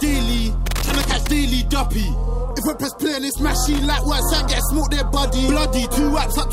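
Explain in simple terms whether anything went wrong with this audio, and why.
Loose connector crackle appears from 0.66 to 1.28 s and again from 3.66 to 3.91 s: a worn or dirty plug contact kept cutting in and out, causing scratchy bursts.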